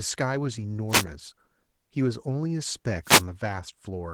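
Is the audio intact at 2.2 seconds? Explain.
No. At 2.2 seconds the speech carries Opus voice compression, present throughout the clip. The lower band is coded by linear prediction with a coarse excitation, which gives the hoarse, slightly robotic edge, while a thin transform layer sketches the top. That layout, and damage this plain, fit roughly 16 kbps in hybrid mode with 20 ms frames. Unlike a simple low-pass, the highs are not cut off. They remain but sound grainy and approximate.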